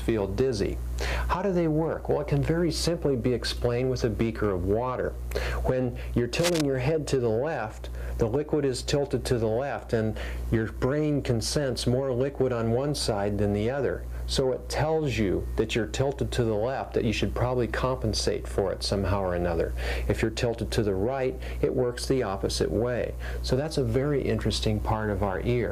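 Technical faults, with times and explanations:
6.39–6.61 s, cable scratch noise: a brief burst of rough, crackly rustling sitting just under the sound, likely a worn lead or connector being jiggled mid-take.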